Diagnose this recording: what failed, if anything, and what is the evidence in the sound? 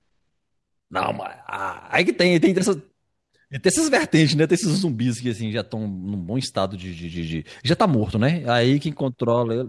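Nothing in the signal chain has failed: the speech arrives intact and continuous, with no audible sign of trouble at any stage from capture to playback.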